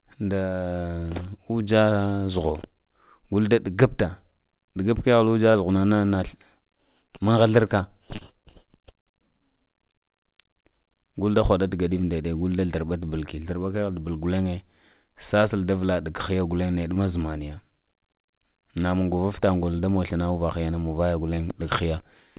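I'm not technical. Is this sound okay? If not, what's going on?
No. There are five brief glitches, at about 5.52, 8.16, 16.94, 18.26 and 21.35 seconds. Each one is short concealed packet loss. A tiny piece of the call, about 20 milliseconds, arrived too late to be played. The receiver hid the gap by stretching out the sound just before it. You hear a quick smear or wobble, and a small sound can drop out. The call line also removes everything above 4 kHz, so the speech sounds narrow.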